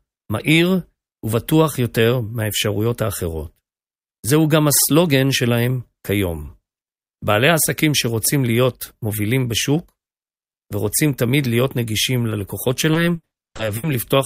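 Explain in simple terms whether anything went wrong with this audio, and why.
Two problems show up near the end of the speech, both caused by parts of the call arriving too late to be played.

The first is a short concealed packet loss at about 12.29 s. A piece of audio only 20 milliseconds long never reached the receiver in time, so the receiver covered the hole by stretching out the sound that came just before it and then blending back into the real audio. Because the patch is so short, it comes across as a tiny smear or wobble rather than an obvious gap.

The second is repeated packet loss, which gives a robotic sound, from about 12.93 s to 13.85 s. Here pieces went missing again and again: seven separate gaps in under a second, the longest lasting 80 milliseconds. The receiver had to invent about 340 milliseconds of sound in total, more than a third of that stretch. With one patch following another, the speech turns choppy, with parts of it missing.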